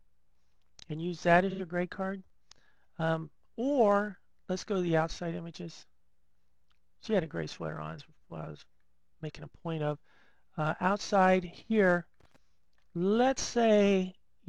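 At 1.50 s there's a short AAC frame loss with concealment, lasting until about 1.61 s. Roughly 85 ms of coded audio went missing, which fits a couple of lost AAC frames. The decoder patched the gap from the last good spectrum, so it comes through as a brief smeared, noisy or phasey blip.

Then from 12.20 to 12.36 s you get loose connector crackle. A worn or dirty contact was making and breaking as it shifted, chopping the signal on and off, and that shows up as a quick irregular burst of crackle and scratchiness.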